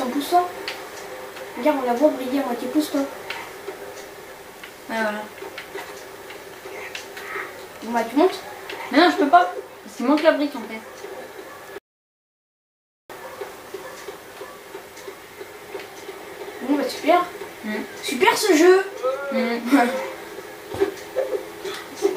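At 11.78 s the audio cuts out abruptly and stays silent until 13.10 s, an audio dropout to silence lasting about 1.3 s. The gap is silent with no room tone or noise floor, and the sound resumes mid-flow rather than fading back. The likely cause is a brief loss of the input signal, such as a disconnected device or interrupted link, while recording continued. Whatever occurred during that stretch is unrecoverable.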